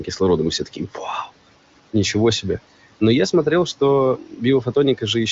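Noise suppressor artifacts run through the whole clip. The suppressor pulls the steady room noise down by about 18 dB, frame by frame. That noise sits about 20 dB below the speech. It dips in the pauses and returns under the speech.

From 0.59 to 1.0 s, there is speech cut by the noise suppressor. It mistakes parts of the speech for noise and turns them down, at worst by about 15 dB. Around a fifth of a second is affected in total. Those sounds come out faint and swallowed.

The AMR wideband (HD Voice) codec leaves little or no audible damage, which fits one of its higher rates.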